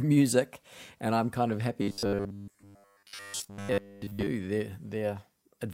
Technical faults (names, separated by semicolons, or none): robotic sound from repeated short buffers